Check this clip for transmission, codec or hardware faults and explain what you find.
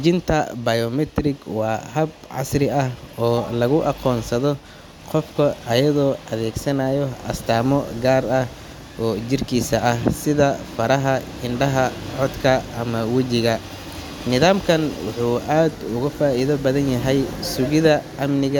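Nothing in this speech recording points to a fault anywhere along its chain. There is no event in it to locate or explain.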